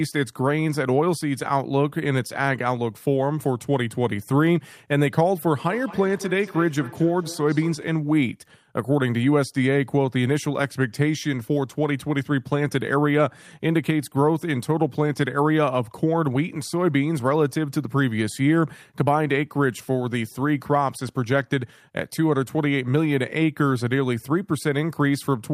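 From 5.68 to 7.92 s, two devices in the same room are joined to one call, and one device's microphone picks up the other's loudspeaker playing back its own earlier signal. Neither echo canceller removes sound it didn't play, so the loop stays open. This feedback echo between two devices makes the speech come back about a fifth of a second later, thinner and ringing, peaking at about 16 dB below the speech.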